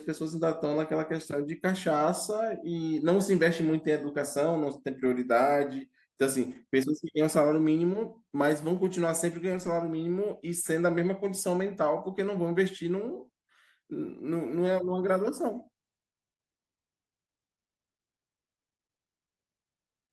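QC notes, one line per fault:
5.01–5.11 s, 6.51–6.57 s, 9.53–9.67 s, 10.97–10.99 s: lost packet rebuilt from error correction. There's no dropout at any of these, just brief rough, noisier patches running 60, 40, 80 and 20 ms, which fits three, two, four and one lost 20 ms packets. The packet after each loss carried a low-bitrate backup copy, and the decoder played that instead, so the audio stays continuous but comes through coarser until normal packets resume.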